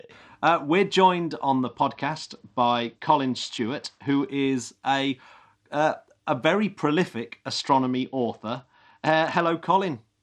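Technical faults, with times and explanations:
1.67–4.29 s and 7.54–9.48 s, Bluetooth SBC bit pool drop: the speech loses its treble and picks up a gritty noise floor. This points to the link cutting the bit pool from about 31 to 10, near 77 kbps, starving the upper sub-bands and coarsely quantising the rest.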